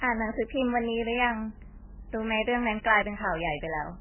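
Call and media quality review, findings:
Watery, swirly speech throughout, dull and muffled, nothing above 3 kHz, consonant attacks smeared. Heavy damage. Likely MP3 compression at a very low bitrate, around 8 to 9 kbps: encoder cuts the treble at a fixed frequency and zeroes weak spectral lines that flicker between frames.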